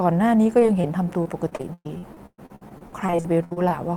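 A speech clip with two kinds of network fault. There are two short concealed packet losses, at 0.59 to 0.63 s and at 0.81 to 0.85 s. In each, about 20 ms of audio never arrived in time. The decoder covered the hole by extending the preceding sound, then faded back into the real signal. Each one is heard as a brief smear or wobble in the speech. The more serious fault is repeated packet loss, giving a robotic sound, from 1.23 to 3.72 s. Here packets drop out again and again, about twenty times. The longest gap lasts 117 ms. Roughly 0.8 s of audio is missing in total, and about a third of that stretch is concealment. The next hole follows soon after each patch. The speech turns choppy, with pieces gone.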